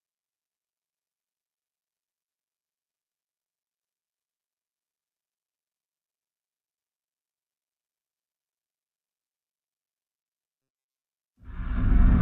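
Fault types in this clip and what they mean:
Robotic sound from repeated short buffers: audio likely arrived too seldom, so a roughly 7.5 ms stretch looped over most of 10.62–11.05 s, leaving a rigid, metallic 134 Hz buzz.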